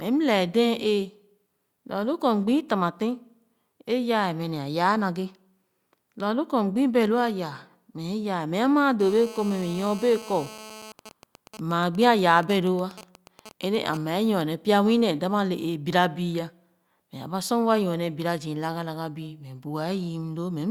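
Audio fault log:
9.00–10.92 s: GSM phone buzz. A hard, raspy buzz sits under the speech. It repeats at 216.7 Hz and carries a dense stack of harmonics. Its level is about 18 dB below the speech. The buzz has nothing to do with what is being said. A nearby 2G handset is sending radio bursts at that rate. Something in the audio path rectifies each burst into a click. The steady run of clicks fits a phone in an active call.
10.99–13.97 s: GSM signalling bursts. The steady buzz breaks up into a pattern of even ticks. A longer buzz comes twice a second, at the same 216.7 Hz rate. The level is around 15 dB below the speech. The handset is now sending only brief groups of bursts instead of a continuous stream. This fits a phone still in a call while its user has gone silent. The audio circuit rectifies each group, so every burst becomes a tick or short buzz.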